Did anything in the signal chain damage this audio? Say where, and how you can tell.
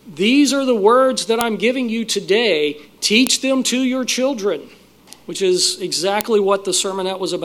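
Yes. The damage is at the storage or file-joining stage: sharp, loud clicks at 1.41, 3.27 and 6.21 s show a file header played as audio. Each joined piece kept its WAV header, so those bytes were decoded as samples, snapping regardless of the surrounding signal.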